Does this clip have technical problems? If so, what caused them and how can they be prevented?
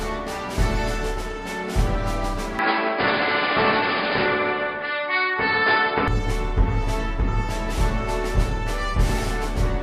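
Yes. Input switched to a poorer device, from 2.59 to 6.08 s. The sound abruptly turns dull, with nothing above 5 kHz, and a faint new background noise appears well below the signal. The level barely changes and there is no gap at either switch. The likely cause is the system changing to another microphone or a headset's call profile partway through. Fixing the input device in the recording settings and turning off automatic device switching prevents this.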